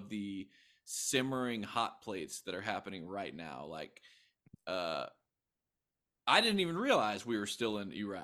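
Speech, no audible faults.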